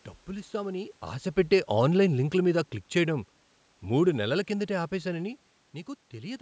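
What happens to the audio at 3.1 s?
At 3.1 s you're near the end of an automatic gain falling stretch that runs from about 1.56 to 3.34 s. The call's gain control decided the input was too loud or its background noise too strong and eased its gain down gradually, by about 3 dB overall. So the level sinks smoothly rather than stepping, and the room noise underneath drops right along with the voice, which is the giveaway that it's gain and not the talker.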